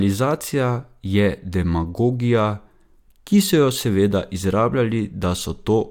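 Nothing goes wrong in this bit of speech; there's no technical fault to point to anywhere in it.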